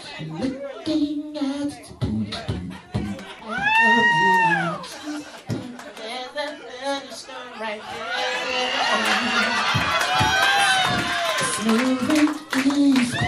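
A click or pop recurs with metronomic regularity, about ten times between 0.74 s and 12.67 s, one every 1.33 s. The likely cause is clock drift buffer slips: two devices on independent clocks disagree by roughly 150 ppm, so a buffer gradually over- or underruns and a few samples are skipped or repeated at each slip. The fixed spacing distinguishes this from network dropouts or random glitches, which arrive irregularly.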